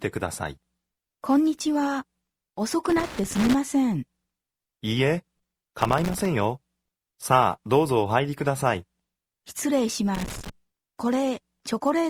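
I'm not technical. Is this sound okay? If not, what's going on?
No. A plug or cable contact somewhere in the chain is worn or dirty, so it keeps losing and regaining its connection as it shifts, a fault called loose connector crackle. Each time the contact breaks, the sound cuts in and out very rapidly, which comes across as bursts of scratchy crackling. It happens three times: from about 2.9 to 3.5 seconds, 5.8 to 6.3 seconds, and 10.1 to 10.5 seconds.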